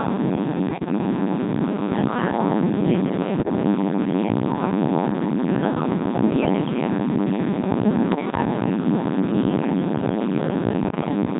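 From the very start the speech has the robotic, buzzy character of the Codec 2 vocoder, heavily degraded and consistent with a rate around 1.6 kbit/s. The decoder rebuilds the voice from a pitch track, a voicing decision, an energy level and a coarse spectral envelope, so the original waveform is gone. On a spectrogram, voiced stretches show unnaturally regular harmonic stripes under a smeared, blocky envelope. The waveform looks synthetic, with no natural breath detail.

Bit errors on digital voice radio then break through in four short bursts: 0.68 to 0.98 s, 3.40 to 3.55 s, 8.12 to 8.42 s and 10.84 to 11.08 s. A few percent of the bits arrive flipped. At this low rate, each bit helps set the pitch, level or spectral shape of a whole frame, so the voice jumps abruptly into bleeps, warbles and garbled robotic sound. The damage spans a handful of frames in each burst, perhaps three to six. 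On a spectrogram these show as sudden steps in harmonic spacing and band energy, and the waveform envelope lurches from frame to frame.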